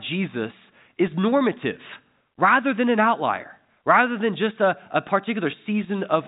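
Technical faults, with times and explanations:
No technical faults are audible.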